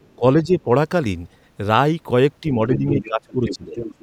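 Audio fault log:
0.03–0.15 s, 2.74–3.08 s, 3.48–3.56 s and 3.77–4.02 s, other side's voice leaking through: a second voice sits under the speech, barely audible at first at around 40 dB below it, then much stronger later at around 10 dB below. This is likely loudspeaker echo the canceller failed to remove. Unlike double-talk suppression, something is added here, a separate voice.
0.17–0.23 s, 0.42–0.68 s and 2.78–3.76 s, speech suppressed in double talk: the main speech itself sinks, by around 10 dB in the two early dips and by around 20 dB over about 0.7 s later on, sounding muffled or partly cut away. The likely cause is an echo canceller turning everything down because both sides spoke at once. This adds nothing, and the loss falls on the talker's own speech.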